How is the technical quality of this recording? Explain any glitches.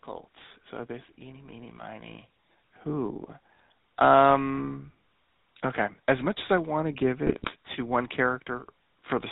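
The recording has two faults. GSM full-rate codec coding colours the whole clip, and a burst of GSM bit errors hits near the end.

The GSM full-rate codec damage is plainly audible from start to finish. The codec models the vocal tract as a filter. It excites that filter with a coarse train of regular pulses. Much of the fine excitation detail is discarded. Nothing above 4 kHz survives. The speech sounds narrow, buzzy and gravelly. The roughness fits the 13 kbps full-rate scheme.

GSM bit errors strike from 7.27 to 7.52 s, just after "I want to give" and before "to one". Corrupted bits reached the decoder. Wrong filter, pitch and gain values distorted the spectrum and threw the level around, frame by frame. The speech breaks into squawks and gargling pops for about a quarter of a second. The density points to a bit error rate of several percent across roughly a dozen frames.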